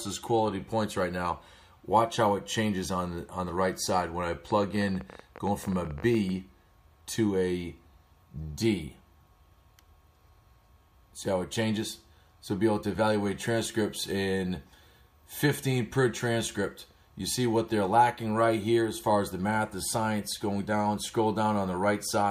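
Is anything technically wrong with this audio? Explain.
Yes. From 4.51 to 6.30 s there is a train of clicks: some thirty sharp, similarly shaped pulses at about 16.2 per second, unevenly spaced, peaking roughly 5 dB above the surrounding sound. The likely cause is an external pulse source, such as nearby electrical interference or a faulty connection or power supply, that adds impulses on top of the signal. It is heard as ragged ticking that persists through quiet moments. The repeated similar shape and bounded burst distinguish it from random crackle or a single isolated pop.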